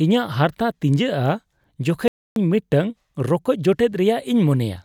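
At 2.08 s the speech cuts to silence in mid-flow and returns at 2.36 s, a gap of about 0.28 s. This playback stall was likely the player running short of data or being blocked. Unlike a click or millisecond dropout, it is a distinct, audible pause.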